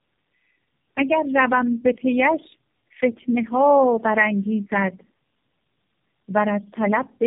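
Rough, muffled and warbly from start to finish, the speech has nothing above about 3.6 kHz, and its texture smears and wobbles in a way no single narrowband codec produces. This is tandem speech coding. The sound points to three low-rate speech codecs in a row, likely G.729A twice and then AMR-NB, with the audio decoded back to ordinary telephone PCM between them. Each coder re-encodes the previous one's artefacts, so the damage compounds.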